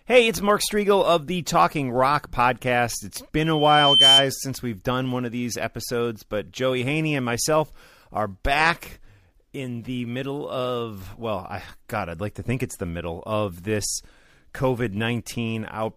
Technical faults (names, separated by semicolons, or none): loudspeaker feedback squeal